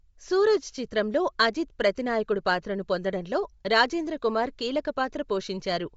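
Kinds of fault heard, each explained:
Bluetooth LC3 compression: The speech carries a plainly audible breathy, grainy edge across the whole clip, with nothing above 7.7 kHz. This is likely the LE Audio transform codec working at a low rate, which fits roughly 32 kbps with 10 ms frames. It zeroes upper-spectrum detail and fills it with noise. On a spectrogram the energy stops flat at 7.7 kHz, and the highs below it look smeared and speckled. The waveform shows no obvious change.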